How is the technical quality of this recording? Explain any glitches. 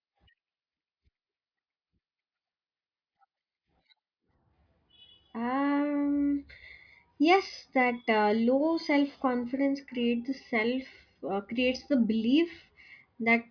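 No glitches or faults heard.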